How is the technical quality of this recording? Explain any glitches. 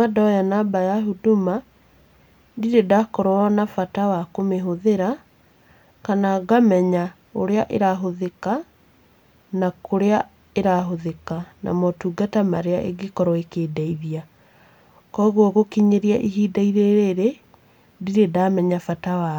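Listening to the recording, nothing stood out as a technical problem, so there are no glitches to explain.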